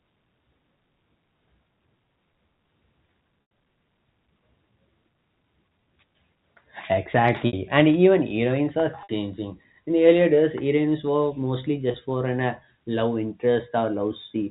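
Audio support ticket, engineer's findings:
Packet loss with pitch repetition, four events in speech. 3.42 s: roughly 90 ms gap bridged by a repeated pitch period, held buzzy tone fading out, consistent with three lost packets. 7.47–7.53 s, before "and even heroines", and 9.03–9.09 s: 60 ms each, brief held note. 11.91–11.94 s, between "days heroines were mostly" and "for an uh love": 30 ms, slight buzz. Receiver concealment, over the G.711 A-law path's 4 kHz band limit.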